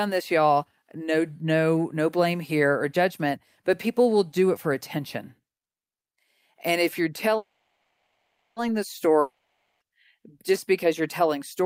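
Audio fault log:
7.37–8.58 s, call audio freeze: Packets were likely held up in transit, emptying the jitter buffer just after "if you're". The receiver stretches the last sound into a fading buzz or hiss for about 1.2 s, ending in 0.22 s of silence, then speech resumes where it stopped, nothing lost but 1.19 s later.
9.20–9.82 s, long network dropout: Audio likely stopped arriving for about 0.6 s and was never recovered. The receiver fills the hole with a decaying continuation of the last sound that fades to roughly 0.1 s of silence, and speech returns with that 0.6 s of content missing.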